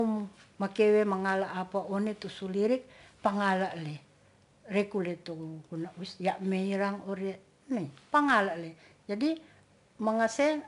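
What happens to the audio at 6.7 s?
At 6.7 s you're hearing the same 4-bit ADPCM compression that runs through the whole speech clip. Each sample is coded as a small 4-bit step from a predicted value, so the error turns into a gritty, plainly audible hiss that rides along with the louder speech and roughens any sharp onsets. Nothing comes through above 10.6 kHz, which dulls the top end. The overall damage fits a rate of roughly 89 kbps.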